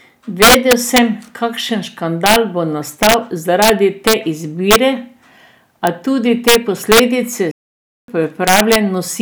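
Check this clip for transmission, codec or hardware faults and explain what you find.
Two faults are present: integer overflow throughout the speech, and a playback stall near the end.

Integer overflow runs through the whole clip. The level is pushed about 6 dB too hot, and peaks past the integer limit wrap to the opposite sign instead of being limited. Under one percent of samples are affected. Each one gives a violent crack on loud syllables, harsher than clipping.

A playback stall runs from 7.51 to 8.08 s. The speech stops dead mid-flow for about 0.57 s, then carries on. The likely cause is the player running short of data, or its thread being blocked, until it recovered.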